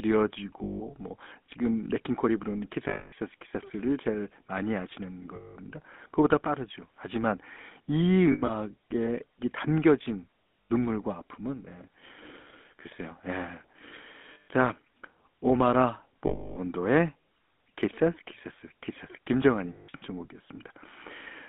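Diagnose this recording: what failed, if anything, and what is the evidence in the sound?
GSM full-rate codec throughout, at the codec stage: a buzzy, gravelly roughness confined to about 200 Hz–3.5 kHz, consistent with 13 kbps pulse-excited coding.

Lost GSM frames at 0.64, 2.88, 5.36, 8.32, 10.65, 14.34, 16.26 and 19.72 s, in the network: 80–300 ms metallic rings as the last good frame repeats.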